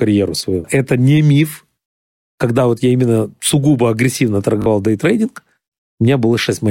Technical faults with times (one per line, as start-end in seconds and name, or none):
4.62-4.66 Bluetooth stutter